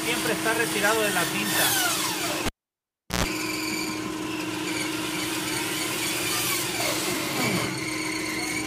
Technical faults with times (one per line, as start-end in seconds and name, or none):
2.46-3.24 cable pulled and plugged in